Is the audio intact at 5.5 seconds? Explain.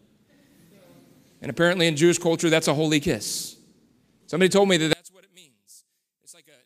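No, one channel inverted from 4.93 s to the end of the clip, right after "told me that", is the likely cause of what happens at 5.5 s. The speech drops by about 30 dB. With one channel's polarity reversed, the centred voice present equally in both channels cancels when they are summed to mono. Only the small difference between left and right survives, leaving a faint trace.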